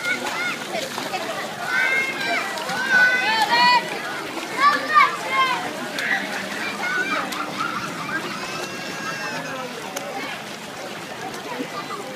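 At 5.97 s the sound jumps forward by roughly 20 ms, likely audio missing between chunks as the recorder closed one 2.5 s block and opened the next. Unlike a dropout, there is no silent gap; the two sides butt straight together, heard as a brief skip.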